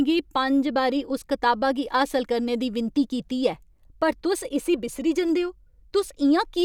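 No technical faults are audible.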